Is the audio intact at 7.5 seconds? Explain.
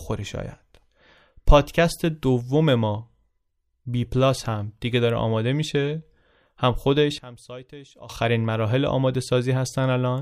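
No. From 7.18 to 8.10 s the speech drops by about 19 dB to a faint copy. This is likely one channel inverted. With reversed polarity, the shared centre content cancels when the channels sum to mono. Only their faint difference remains.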